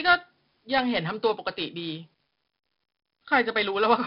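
4-bit ADPCM compression throughout: coarse predicted steps add heavy gritty hiss that follows the speech level, and nothing above 5.4 kHz remains.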